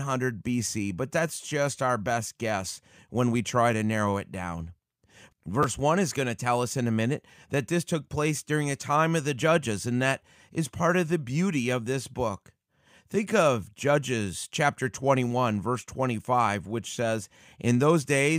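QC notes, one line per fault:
1.49–1.51 s, repeated buffer: between "but that's" and "our best guess when", one short chunk plays three times in a row, each join hard-edged, giving a brief buzz. The 10 ms repeat spacing fits a 10 ms buffer. About 20 ms of audio is lost.
5.63 s, repeated buffer: a single 10 ms repeat, heard as a click. About 10 ms of audio is lost.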